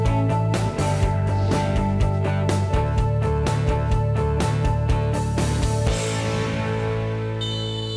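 Aliasing runs through the whole clip: high content has been folded back around 11 kHz, which fits a drop to 22 kHz sampling without an anti-alias filter. Unlike a plain low-pass roll-off, the band stays full right up to the edge, with gritty, inharmonic tones sitting roughly 30 dB below the signal.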